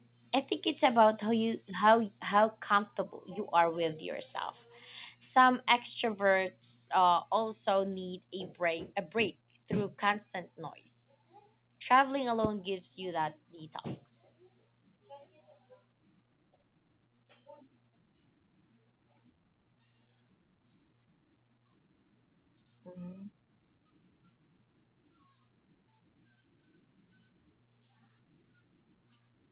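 No faults are audible; the speech carries through a call path with nothing above 4 kHz, which fits a G.711 A-law codec at 64 kbps.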